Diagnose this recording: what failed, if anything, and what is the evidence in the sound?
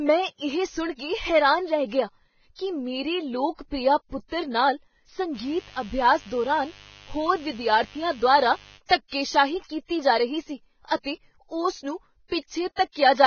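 Codec stage: heavy grainy damage throughout and nothing above 6.5 kHz, seen on a spectrogram as a flat ceiling over speckled treble; likely low-bitrate Vorbis compression.

Analogue wiring: mains buzz from 5.33 to 8.80 s, after "ਲੋਕ ਪ੍ਰਿਆ ਪੁੱਤਰ ਨਾਲ", roughly 25 dB under the speech, showing as stacked 50 Hz harmonic lines from switching spikes.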